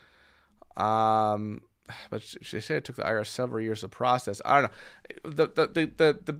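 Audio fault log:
Nothing in the speech stood out as a fault on listening.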